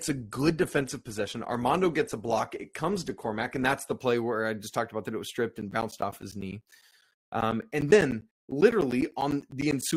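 Adaptive stream starting at a low bitrate, from 0.0 to 4.0 s: the speech opens thin and smeared, with nothing above 12.2 kHz, which fits a low Opus rate near 16 kbit/s. Once the connection is measured, quality jumps cleanly upward, without a gap, just before "where I just talked".

Periodic USB or driver dropouts, from 5.61 to 9.92 s, starting after "that it was stripped": every 0.1 s a background task stalls the audio path, and around 10 ms of sound becomes silence. About forty evenly spaced ticks result, audible only while speech continues.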